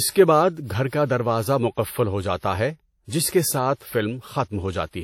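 WMA compression artefacts run throughout the speech: a ringing, washy texture with hiss that swells and fades with the signal, likely from a transform codec quantising coarsely over long blocks, which fits a bitrate near 48 kbps. Nothing remains above 17.4 kHz.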